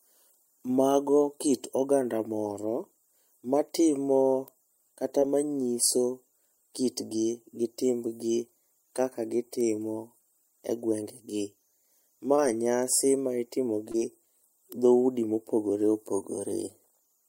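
Short concealed packet loss at 5.19, 12.36 (just before "nyasi ma itimo") and 13.92 s (just after "nyasi ma itimo"): about 20 ms of speech failed to arrive and was patched with continued sound, so each brief smear replaces the gap instead of leaving a silent dropout.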